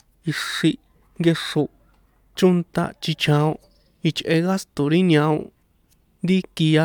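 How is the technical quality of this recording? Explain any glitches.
Nothing stood out as a technical problem on listening to this recording.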